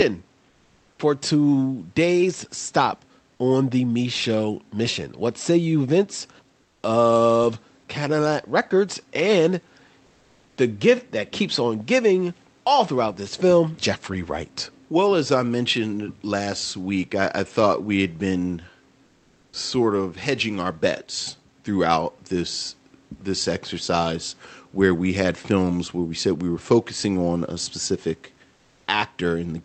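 Speech over a call path, where discontinuous transmission likely cut off the sender during pauses, so steady comfort noise replaces the real room background at 0.49–0.99 s, 6.61–6.83 s (about 6 dB quieter), 10.05–10.57 s, 19.05–19.53 s and 28.55–28.87 s. The voice detector was likely late to reopen at 19.51 s, so "of hedging our bets" starts abruptly, with about 20 ms of its onset missing. Above about 8 kHz there is nothing, which points to an Opus-coded call path.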